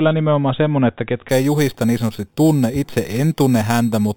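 A speech clip. From 1.29 s to the end there's imaging from sample-and-hold upsampling, a bright metallic fizz about 20 dB down that tracks the speech level. The lowest mirror copy sits between 4 and 8 kHz, which fits an 8 kHz source raised to 48 kHz by repeating samples without smoothing.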